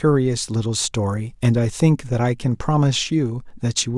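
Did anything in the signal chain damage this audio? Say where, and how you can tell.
No, nothing along the chain seems to have harmed this speech recording; I can't find a single stage that left its mark on the sound.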